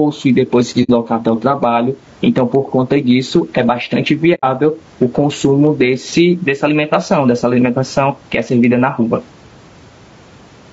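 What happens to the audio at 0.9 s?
Right around there, from about 0.83 to 0.90 s, there's AAC frame loss with muting. The decoder lost a chunk of the stream, about 60 ms of it, which points to two missing frames, and it filled the gap with silence by zeroing the spectrum. Because the overlapping windows blend into and out of that silence, you hear a soft-edged hole: the sound fades down, sits empty briefly, then fades back up.

Under that dropout, and all through the clip, there's gain pumping. The level gets yanked down on every loud bit and lets back up in the pauses, a swing of roughly 15 dB. The room noise sits about 39 dB below the speech, and everything sounds squashed together. The likely cause is gain set far too hot, with a fast limiter or compressor clamping down on each peak.

On top of that, the speech has a rough, grainy edge. There's noise filling in between the harmonics, and the top end sounds a bit artificial. 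That's the signature of low-delay AAC compression, likely AAC-ELD at something like 32 kbps. Its short frames can't pin down pitch harmonics cleanly, and at that bitrate the damage is plainly audible.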